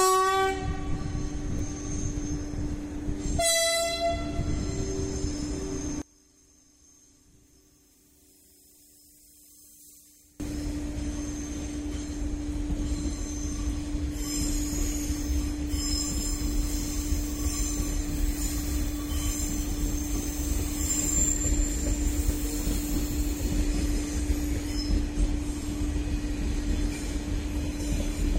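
From 6.02 s to 10.40 s the sound collapses to a faint residue, about 26 dB down, and returns in full afterwards. The likely cause is one channel inverted: with one side's polarity reversed, everything common to both channels cancels when summed to mono, leaving only their small differences. Unlike a dropout or gain dip, which would simply quieten the whole signal, this leaves only a faint remnant of the mismatch between the channels.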